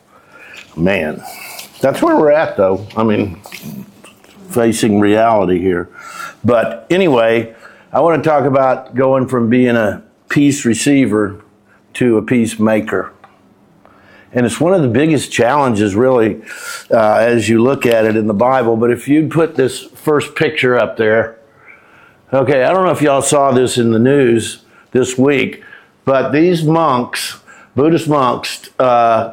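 Nothing in the audio stood out as a technical problem on listening.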